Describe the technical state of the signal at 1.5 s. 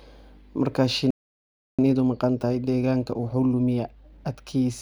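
At 1.5 s the speech has stopped dead in mid-flow: the output is silent from 1.11 s to 1.79 s, a gap of about 0.68 s, before the audio carries on. This is a playback stall. The likely cause is that the player's buffer ran dry or its playback thread was held up, so it had nothing to send to the output until data arrived again.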